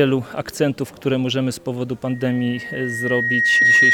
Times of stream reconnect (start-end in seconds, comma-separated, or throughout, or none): none